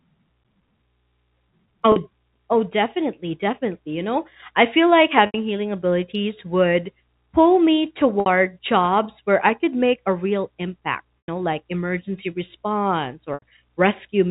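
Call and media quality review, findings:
Packet loss with pitch repetition at 1.92 s (40 ms), 5.26 s (80 ms, after "know I feel like"), 8.20 s (60 ms, after "abilities would pull me"), 11.20 s (100 ms), and 13.34 s (80 ms, after "know like emergency response"). Symptom: a brief buzzy held tone, and on the longer gaps a fade into a dropout. The likely component is jitter buffer concealment replaying the last pitch cycle, which fits 20 ms packets. On the waveform, identical repeated cycles decay. On the spectrogram, frozen flat harmonics taper off. The G.711 mu-law path has its usual 4 kHz band edge.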